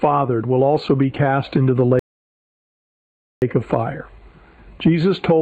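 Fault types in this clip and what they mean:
Rebuffering stall: the player exhausted its downloaded audio and paused until more arrived, so the sound falls silent from 1.99 to 3.42 s, adding about 1.43 s. Unlike a dropout, it resumes exactly where it stopped, with nothing skipped.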